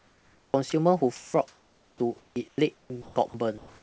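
The sender's voice detector most likely switched transmission on and off, chopping the sound by the voice detector from 0 to 0.72 s and again from 1.16 s to the end. About 0.56 s of the first stretch and 1.57 s of the second were swapped for comfort noise, so the speech comes through in choppy fragments, and the low room noise sits about 41 dB under the speech.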